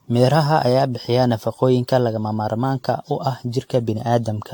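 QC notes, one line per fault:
Throughout, generation loss: swirly, smeared, hollow speech with blurred attacks, likely from around seven re-encodes (consistent with AAC-LC near 96 kbit/s), each requantising on a shifted frame grid. The spectrogram shows accumulating holes and a hard ceiling at 18.9 kHz.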